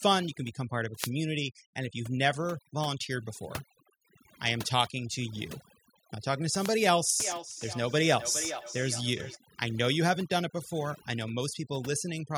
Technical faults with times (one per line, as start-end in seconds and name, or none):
0.00-12.37 overdone noise removal
0.93-1.12 wireless microphone noise hit
6.56-6.73 wireless microphone noise hit
7.22-9.40 feedback echo between two devices